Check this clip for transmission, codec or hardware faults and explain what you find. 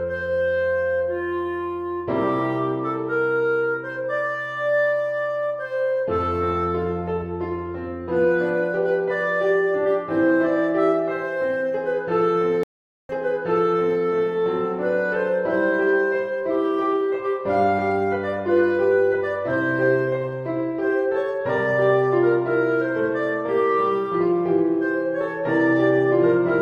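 One fault stands out. From 12.63 to 14.01 s the audio cuts to silence for 457 ms, then resumes 920 ms earlier than where it stopped, so a short stretch plays twice. This is a stream reconnect: the connection dropped, the player reconnected and started a fresh decoder, and the server resent a burst of already-played audio.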